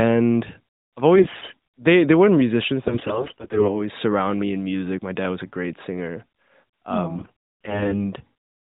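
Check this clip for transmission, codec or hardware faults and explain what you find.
There are AMR bit errors in three bursts: 1.16 to 1.57 s, just before "they they weren't musicians"; 2.84 to 3.81 s, ending at "surround me in music"; and 7.16 to 8.13 s. Flipped bits in the weakly protected parts of the narrowband AMR frames misplace the excitation pulses and corrupt pitch, gain and spectral detail. Pitch and level hold roughly steady, but the speech turns hoarse, scratchy and gargly, worst in the middle burst.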